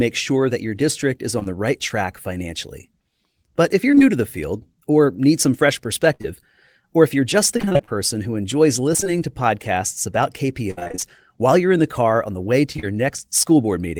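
Speech with dropouts. At 1.39 s and again at 1.43 s there's a brief smear, two back-to-back patches of about 20 ms each. This is short concealed packet loss: audio arrived too late, and the receiver filled each hole by extending the preceding sound before blending back. Between 3.91 and 4.02 s the sound turns choppy and robotic. This is repeated packet loss in quick succession, with about 60 ms missing and concealment covering nearly half that span. A longer run from 6.14 to 12.87 s brings intermittent choppy, broken patches. Roughly 0.56 s is missing across many gaps, the longest about 63 ms, each patched by continuing the last sound.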